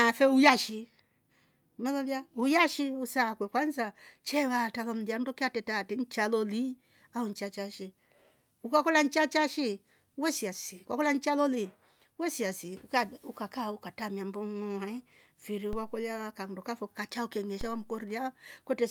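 A DC step occurs at 15.73 s and again at 17.61 s. Each time, the waveform's zero line suddenly jumps to a new offset, as if a converter recalibrated or an input carrying a standing offset was switched in. The speech continues undisturbed, but each jump is heard as a brief low thump. Rather than holding, each offset then drains away along the slow curve of a 2 Hz high-pass, so no lasting shift remains.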